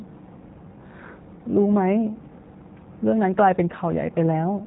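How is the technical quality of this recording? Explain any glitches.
The quality is limited by plainly audible low-bitrate codec damage. Throughout, the G.729 codec rebuilds the speech from a vocal-tract filter and a few pulses per frame, fitting roughly 8 kbit/s, leaving nothing above 3.8 kHz and a rough, synthetic edge.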